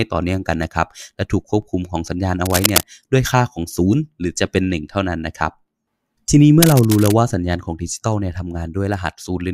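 Cable scratch noise rasps over the speech at 2.45–2.87 s, roughly as loud as the speech, and more quietly at 6.62–7.14 s, likely from a worn connector being moved. Both bursts show as ragged broadband smears on a spectrogram.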